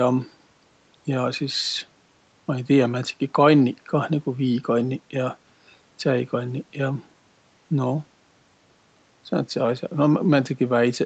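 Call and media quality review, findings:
No faults found in the speech; content stops at 8 kHz, consistent with the call mic chain's processing and a wideband Opus call path.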